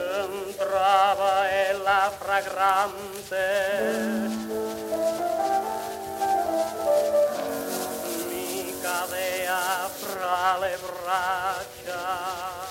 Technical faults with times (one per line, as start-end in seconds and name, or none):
7.48-10.15 pre-emphasis left on